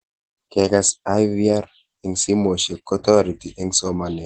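Opus voice compression runs throughout this speech clip, with nothing above 8.7 kHz. The wideband SILK coder's coarse excitation coding, which fits a bitrate near 12 kbps, leaves the voice plainly muffled, hoarse and slightly robotic.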